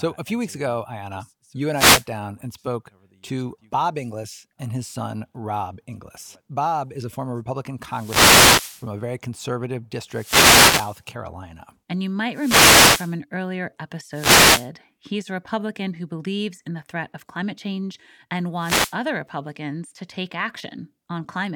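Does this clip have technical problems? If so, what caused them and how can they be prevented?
Yes. Wireless microphone noise hits occur at 1.71–2.07 s, 7.87–8.90 s (before "a very conservative"), 10.08–11.03 s (after it), 12.31–13.17 s, 14.11–14.70 s and 18.58–18.97 s (after "of climate change and"). Each is a brief swish or burst of static over the speech. The FM radio signal fades as reflections cancel, and receiver noise rises. Unlike a digital dropout's silence, static fills these gaps. Diversity receivers and a clear line of sight to the antennas prevent this.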